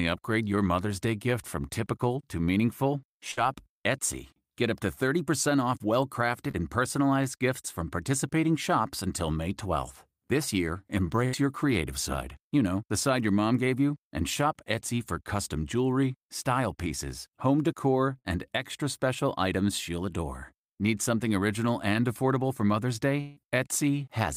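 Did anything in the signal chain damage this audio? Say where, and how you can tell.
Yes, the damage sits in the network stage, where the decoder had to cover for missing packets. The clearest case is burst of packet loss, three times: 3.31 to 3.39 s right after "from typical to meaningful", 11.25 to 11.35 s, and 18.19 to 18.27 s between "style pieces home decor" and "extra special items she'll". Each time the last sound is stretched into a fading buzz or hiss for roughly 56 to 74 ms, then the audio jumps ahead, having skipped 60 to 80 ms.

There's also a short concealed packet loss at 6.51 to 6.55 s, between "off well" and "and personalized gifts from". It's tiny. About 25 ms of synthesized fill papers over a 20 ms hole and blends back into the real audio, so you hear a quick smear or wobble rather than a gap. The decoder extrapolated from the preceding sound, which is why it never goes silent.

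Near the end, 23.21 to 23.38 s, the sound holds as a decaying buzz or hiss for about 155 ms and then resumes further along, with about 160 ms gone. It never drops to silence. That length points to a long network dropout as the likely cause: a stretch where nothing arrived and concealment carried the last sound as far as it could before real packets returned.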